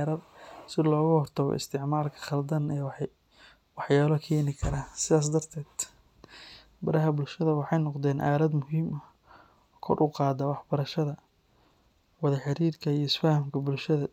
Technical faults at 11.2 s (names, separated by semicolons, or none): none